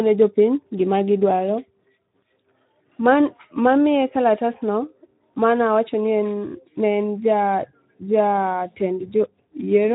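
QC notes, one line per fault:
Throughout: Speex codec. The speech has been through a Speex-style CELP encoder at a low setting, which fits a bitrate around 11 kbps. That leaves too few bits to model the excitation, so voiced sounds come out plainly hoarse and grainy, with a noisy, buzzy texture in place of a clean pitch. The encoder also works in a narrow band: nothing survives above about 3.8 kHz, so sibilants and breath are dulled and the whole clip sounds muffled and telephone-like.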